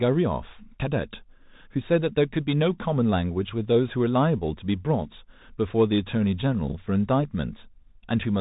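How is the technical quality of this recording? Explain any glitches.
The recording is technically poor: across the whole clip, the speech carries plainly audible damage from a Bluetooth CVSD headset codec.

Bluetooth CVSD headset codec, throughout: the sound behaves as if it were coded one bit per sample, each bit only nudging the level up or down with an adapting step, which fits the 64 kbps CVSD link. Everything above 4 kHz is gone, leaving a muffled, narrowband voice. Loud high-frequency moments outrun the step size and distort, s sounds come out scratchy, and a grainy hiss sits beneath the speech.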